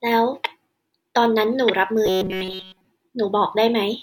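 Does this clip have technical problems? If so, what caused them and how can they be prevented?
Yes. Robotic sound from repeated short buffers appears from 2.06 to 2.85 s: the speech becomes a rigid metallic buzz at 188 Hz. This is likely because audio arrived too seldom and most of that stretch was filled by looping a roughly 5 ms buffer while real audio was skipped. Preventing it means giving the audio path larger buffers, higher thread priority or a steadier network feed.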